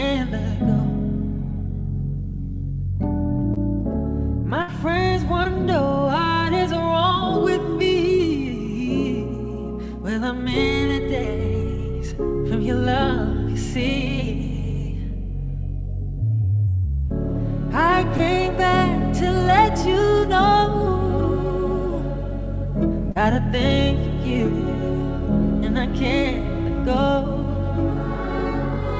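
At 3.54 s comes the first short concealed packet loss: about 20 ms of audio never arrived in time, and the receiver bridged it by extending the preceding sound before blending back. It is heard as a quick smear or wobble. On a spectrogram it appears as a thin vertical strip where the harmonics run on unchanged. In the waveform it shows as a few near-identical repeated cycles.

From 4.62 to 4.70 s a burst of packet loss removes about 60 ms in a row. The concealment holds the last sound and lets it decay into a fading buzz or hiss, then the audio jumps ahead with that stretch missing. A spectrogram shows flattened harmonics dimming toward the background before an abrupt restart. The waveform shows a shrinking envelope of repeated periods.

The same short concealed loss recurs at 5.44, 16.65 and 18.17 s, each about 20 ms, and at 23.11 s, where roughly 40 ms is bridged. Across the whole clip nothing sits above 8 kHz, which points to a wideband call codec such as G.722 at 64 kbps.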